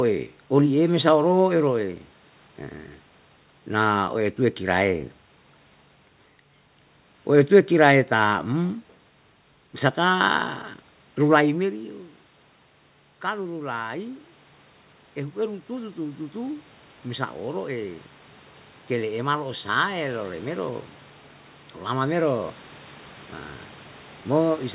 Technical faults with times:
13.21-22.58 automatic gain rising

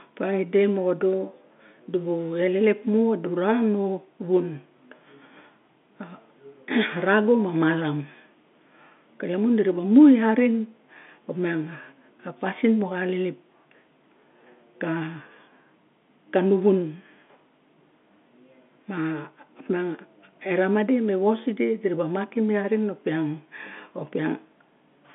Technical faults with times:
none

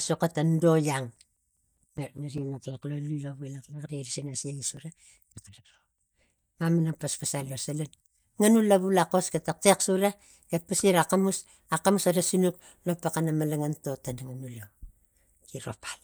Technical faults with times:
0.96-2.78 CD scratch ticks
4.57-7.20 CD scratch ticks

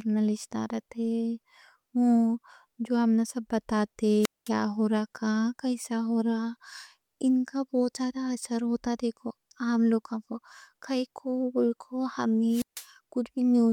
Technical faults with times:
4.21-4.49 wireless microphone squelch dropout
12.48-12.87 wireless microphone squelch dropout

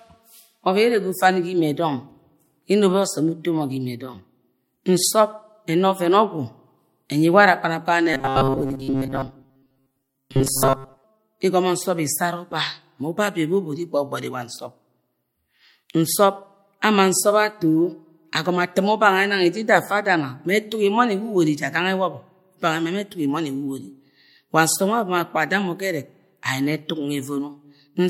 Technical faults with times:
8.14-11.04 robotic sound from repeated short buffers

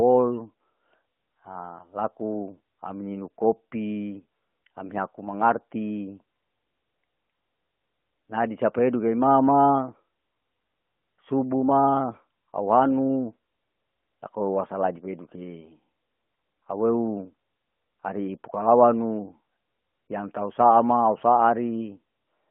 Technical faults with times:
15.60-15.73 lost AMR speech frames

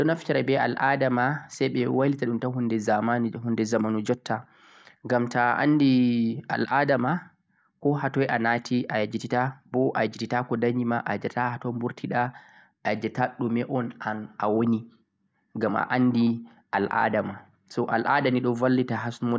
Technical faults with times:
none

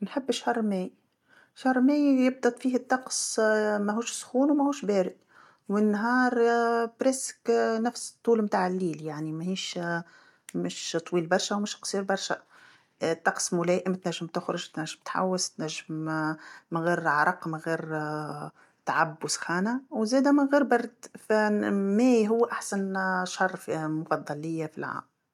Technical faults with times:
none

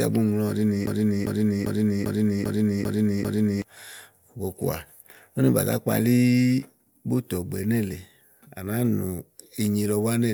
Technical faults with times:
0.87-3.62 broken-record loop

